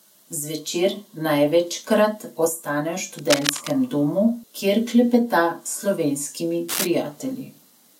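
From 3.17 to 3.71 s, between "največkrat ostane v" and "domu kjer klepeta", and again from 6.68 to 6.87 s, bursts of cable scratch noise rasp over the speech only a little below its level, likely a worn cable or connector being moved. Unlike a digital click or dropout, each event is a dense, uneven scratching rustle lasting a fraction of a second rather than a single sharp tick or a gap in the sound.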